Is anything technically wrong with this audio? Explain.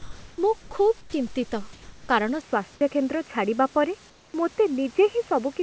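Yes, three kinds of fault are audible in this speech clip.

Comfort noise in place of the background occurs at 0.0 to 0.38 s, just before "ମୁଁ ଖୁବ୍", then at 1.73 to 2.09 s and 4.10 to 4.34 s. These are likely discontinuous-transmission gaps where the receiver synthesises noise instead of passing the real room sound. The background turns flat and featureless, about 25 to 31 dB below the loud speech. Its level shifts by about 3 dB in the first gap, about 1 dB in the second, and drops about 5 dB in the third. On a spectrogram these stretches look like smooth, uniform haze with none of the fine texture around them.

Sound dropped by the voice detector occurs at 0.62 to 0.71 s and at 1.01 to 1.13 s, the second just after "ମୁଁ ଖୁବ୍". The detector likely judged part of the speech to be background and stopped sending. Steady noise replaces the audio for 90 ms and 120 ms, clipping about 60 ms and 50 ms of actual speech, so the sound seems chopped off. 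The waveform shows the speech envelope collapsing abruptly into a low, even noise floor.

Input switched to a poorer device happens at 2.41 s and lasts to the end. There is a 20 ms silence at the switch, and the level then changes by a few dB. Nothing passes above 3 kHz, whereas before the switch the call path carried content up to 8 kHz. The speech therefore turns dull and boxy. The most likely cause is a change to a narrowband input such as a headset call profile. On a spectrogram the upper band empties abruptly at 2.41 s, after a thin vertical gap.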